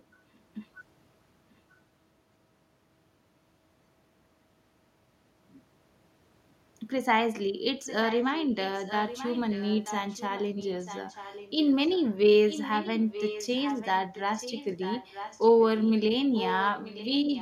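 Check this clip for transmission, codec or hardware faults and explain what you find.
An echo leak is present: a delayed copy of the speech at 0.34–0.38 s, 7.84–12.04 s, 12.48–15.46 s and 16.36–17.41 s, returning about 0.94 s late. It is barely audible at first and grows to only about 10 dB below the speech. The likely cause is the far end's echo canceller letting loudspeaker pickup through. The long, fixed lag separates it from room reverberation, which smears the sound instead of repeating it.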